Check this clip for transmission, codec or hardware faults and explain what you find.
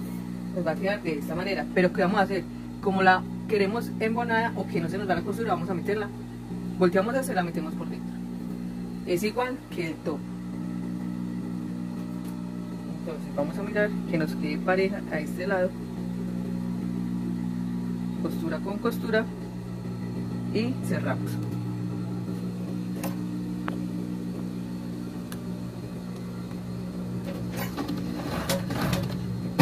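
No faults found.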